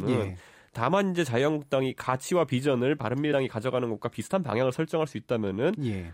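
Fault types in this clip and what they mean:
Compressed frames skipped: at 3.32 s the speech jumps ahead by about two frames of 26.1 ms each, roughly 50 ms of audio, because those frames were lost or refused by the decoder.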